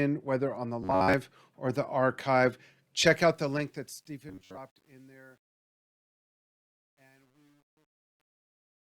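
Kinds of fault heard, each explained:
Robotic sound from repeated short buffers: From 0.83 to 1.14 s and again from 4.29 to 4.59 s, the speech hardens into a metallic buzz locked at 93.8 Hz. This likely comes from replaying a buffer of about 11 ms while fresh audio is skipped. Unlike a stall, there is no pause.
Truncation distortion on a fade: The fade-out starting near 3.1 s is quantised coarsely, which fits a 10-bit stage without dither. As the level sinks, the waveform breaks into square steps. From 4.18 s to the end it turns gritty rather than thinning smoothly.
Rebuffering stall: From 5.65 to 6.87 s the sound cuts to silence for 1.2 s, then resumes exactly where it stopped. Nothing is lost and only time is added, which separates it from a dropout or from repeated buffers that skip or replace audio.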